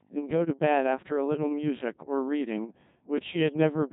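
From start to finish the speech carries the heavy, robotic buzz of the Codec 2 vocoder, at a sound quality that fits its 1.6 kbit/s mode. The decoder never receives the real waveform, only pitch, voicing, loudness and a coarse spectral shape, and rebuilds each syllable from a bank of sine waves. That gives the flat, synthetic tone and smeared consonants. On a spectrogram the harmonics look unnaturally regular, and nothing appears above 3.8 kHz.

Between 3.18 and 3.20 s a single loud pop lands on top of the speech, peaking around 10 dB above the surrounding level. A brief electrical step, most likely from a switch, plug contact or driver glitch, is added to the signal while the speech continues underneath. It is heard as one sharp click-thump. On the waveform it is a tall, narrow spike standing well clear of the envelope. On a spectrogram it is a thin vertical stripe running across the whole band.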